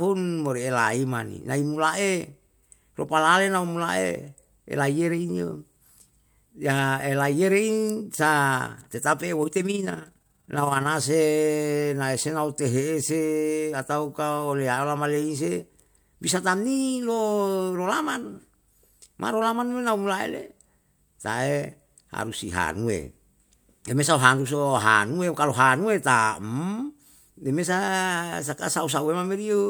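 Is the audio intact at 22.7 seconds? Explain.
Yes, at 22.7 seconds the audio is intact, with no dropout, click, distortion or other fault to be heard.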